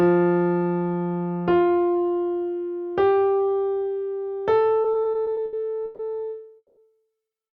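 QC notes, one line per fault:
4.83–6.01 s, repeated stalls (stutter): the jitter buffer ran dry eight times, each stall bridged by stretching the last sound, 330 ms in all and up to 140 ms at once, about 28% of the span. It drags and stutters. Spectrogram shows smeared, repeated frames between normal stretches.
6.57–6.79 s, call audio freeze: the sound holds as a fading buzz or hiss for about 200 ms, ending in roughly 30 ms of silence, then resumes where it stopped. Likely packets delayed by about 200 ms. Waveform shows a decaying plateau then a flat gap.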